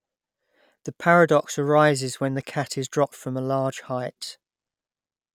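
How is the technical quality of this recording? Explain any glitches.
No glitches or technical faults are audible anywhere in this speech recording, so there is nothing to explain.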